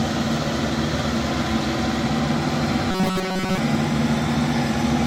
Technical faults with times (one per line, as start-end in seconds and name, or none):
2.91-3.58 robotic sound from repeated short buffers